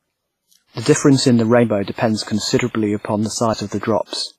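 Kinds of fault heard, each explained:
WMA compression: Heavy transform-codec damage throughout, with ringing, washy smearing of the speech and a hiss that rises and falls with the signal. Nothing is present above 15.5 kHz. This is likely WMA at a low bitrate, consistent with about 24 kbps.
Audio missing between chunks: Two skips, at 0.69 s and 2.59 s, where roughly 50 ms of speech vanishes and the surrounding audio is butted together without a gap. This likely comes from a recorder or processor dropping material while switching between fixed-length chunks.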